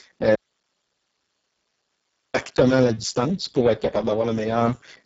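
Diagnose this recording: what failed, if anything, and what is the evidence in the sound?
The codec stage failed first: a Speex encoder running at one of its lowest quality settings, consistent with a rate near 6 kbps. With so few bits for the excitation, the speech sounds hoarse and noisy throughout. Nothing is present above 7.7 kHz, and the upper band below that edge is a shaped, hiss-like fill rather than real detail. The damage is heavy across the whole clip.

The second fault is an audio dropout to a faint residue from 0.35 s to 2.34 s, lasting about 1.99 s. The speech cuts off abruptly and returns just as suddenly, with no fade at either edge. The gap holds only hiss, roughly 50 dB below the speech level. The output path stayed live while the wanted signal vanished, which likely points to a stall upstream, such as lost input or a starved buffer, rather than a muted output.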